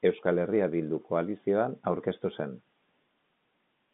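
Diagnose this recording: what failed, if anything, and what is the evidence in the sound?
Nothing stood out on listening: the speech comes through the G.711 telephone coding as expected, confined to the narrow telephone band with nothing present above about 3.8 kHz.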